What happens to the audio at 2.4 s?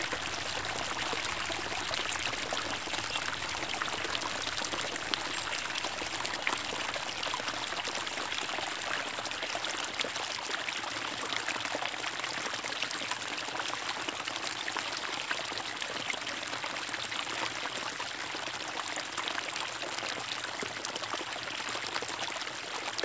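Nothing goes wrong at 2.4 s; the sound carries on intact through that moment, with no dropout, click, glitch or other disturbance.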